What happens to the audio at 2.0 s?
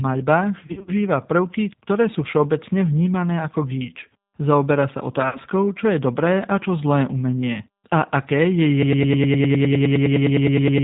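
At 2.0 s, as throughout the clip, the speech has passed through the G.729 codec, with damage that fits the 8 kbit/s G.729A variant. Each 10 ms frame is rebuilt from a vocal tract filter, a pitch estimate and a handful of pulses, and nothing above 4 kHz survives. The result is plainly audible: the speech sounds muffled and band-limited, with a rough, slightly synthetic buzz.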